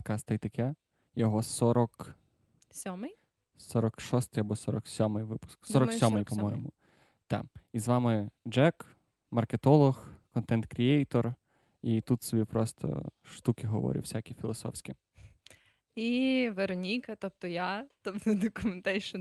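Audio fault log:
No faults heard anywhere in this speech recording.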